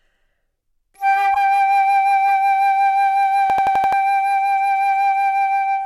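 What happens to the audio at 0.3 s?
Nothing goes wrong at 0.3 s; the sound plays through that moment intact, with no dropout, click or distortion.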